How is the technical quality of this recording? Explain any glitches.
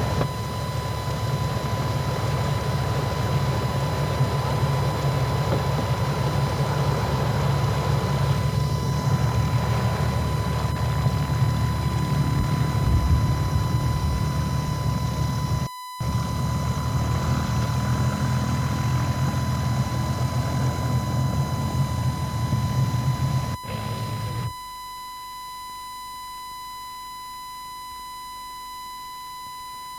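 The recording carries a steady USB whine from start to finish. It is a fixed tone at 1 kHz, sitting roughly 15 dB below the sound itself. The USB bus draws current in 1 ms frames. That pulsing leaks into the audio through shared power or ground, producing this constant, clearly audible whine.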